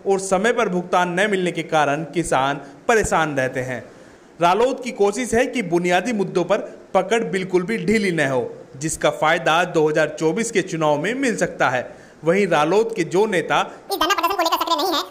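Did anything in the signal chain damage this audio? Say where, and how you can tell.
Yes. A section at the wrong speed runs from 13.89 s to the end at 15.10 s. The audio abruptly plays twice as fast and rises roughly ten semitones. Speed and pitch moving together points to a playback or editing stage, likely running against the wrong clock.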